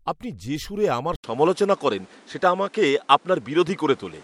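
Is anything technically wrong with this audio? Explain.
Yes. From 1.16 s, after "আপনি যে সুরে আমার", an 80 ms gap breaks the speech, then the spectrogram shows nothing above 11.4 kHz, a roughly 5 dB level shift and a new noise floor. This is likely an input switched to a poorer device.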